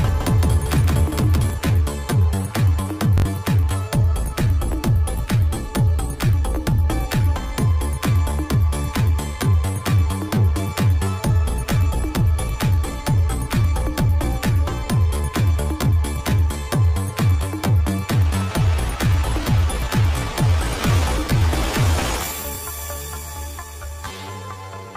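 From the first moment until 1.5 s the audio carries a doubled audio track: a full-band copy about 5 dB quieter trails the original by roughly 150 ms. It is most likely a second capture path or a misaligned edit. On a spectrogram every onset appears twice, with no smeared decay between the copies, and the copy stops abruptly at 1.5 s. Bluetooth stutter follows at 3.18 to 3.25 s, where about 64 ms of sound is replaced by short repeated slices, a brief buzz consistent with three lost packets. Single 21 ms repeats sound at 19.43 and 22.55 s. On the waveform each shows as a copied block of identical cycles, and the audio resumes further along as if it had kept playing.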